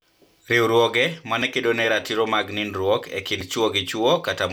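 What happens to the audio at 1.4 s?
At 1.42 s the speech skips very briefly, just before "ne kedo ne ratiro": a few milliseconds of sound are gone and the two sides butt straight together with no gap of silence, so the flow jumps slightly. This is audio missing between chunks, likely from the recorder or processor handling the audio in 2-second blocks and dropping a sliver while it closes one block and opens the next.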